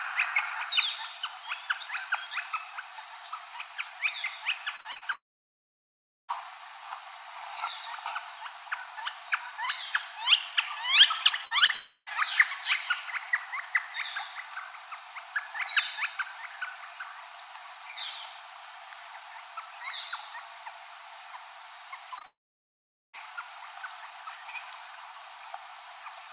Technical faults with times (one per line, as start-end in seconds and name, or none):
4.76-5.03 repeated packet loss (robotic sound)
5.13-6.30 long network dropout
11.28-11.70 repeated packet loss (robotic sound)
11.74-12.08 long network dropout
22.18-23.18 scattered short gaps
22.25-23.19 long network dropout